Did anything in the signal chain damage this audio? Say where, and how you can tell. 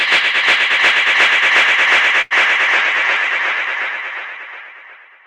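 Yes. A short stall from a late packet at 2.21 to 2.33 s in the network jitter buffer: the sound is held for about 93 ms, nothing lost, and later timing shifts by 93 ms.

A call bitrate drop from 2.76 s to the end at the codec: rate falls from 96 to 9 kbps and bandwidth from 20 to 8 kHz, so the sound turns muffled and coarse.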